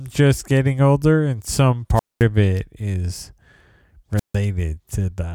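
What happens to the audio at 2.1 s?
Right around there you get a wireless microphone squelch dropout, running from about 1.95 to 2.24 s, just after "getting older and some" and before "it is". The radio link fades, a bit of hiss creeps up, and then the receiver's squelch slams the output shut, leaving roughly 0.22 s of near silence. Once the signal recovers, the squelch reopens and the speech picks back up.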